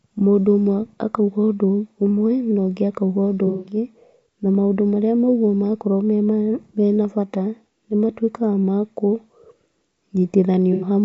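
From start to finish the speech has a rough, grainy texture with plainly audible codec damage, likely from low-delay AAC compression at around 32 kbps, as used in video calls. Its very short frames can't separate the pitch harmonics cleanly, so noise fills the gaps between them and the top band sounds thin and synthetic. On a spectrogram the harmonic stripes look blurred and speckled, and the high band looks patchy.

Just after "na ũngĩ akauga ũndũ", from 3.47 to 3.76 s, there is an AAC frame loss with concealment. About 180 ms of audio is missing, which fits a run of several consecutive lost frames. The decoder rebuilds the gap from the last good spectrum, so it sounds smeared and noisy rather than silent. A second, shorter loss of about 90 ms occurs from 10.73 to 10.87 s and sounds like a brief phasey blur. On a spectrogram both show as frozen, washed-out blocks.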